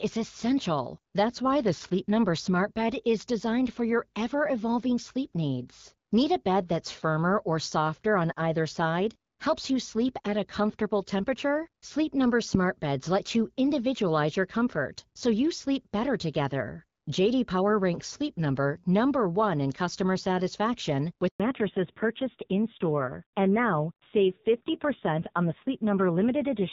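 At 21.28 s, just after "in customer satisfaction", a handover gap cuts the speech for 120 ms, until 21.40 s. The voice fades out within a few tens of milliseconds rather than clicking off, and the silence is clean, with no garbled or repeated fragments as packet-loss concealment would leave.

From 21.40 s to the end, a fallback to narrowband removes everything above 4 kHz. Sibilants lose their hiss and the voice turns dull and rougher, which points to a low-rate AMR narrowband mode. Before the gap, the AMR wideband (HD Voice) codec carried audible content up to about 7 kHz. This is a lasting change of codec at the handover, not a passing dip in quality.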